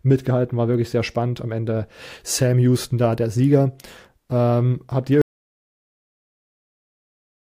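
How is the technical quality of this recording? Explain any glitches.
The recording has one fault: an audio dropout to silence that begins at 5.22 s and runs to the end of the clip. The input signal was most likely lost, through a disconnected device, a broken link or an accidental mute, while the recorder kept writing silence. Right after "habt ihr" the speech stops abruptly and gives way to total silence, with no room tone at all. Whatever followed is gone.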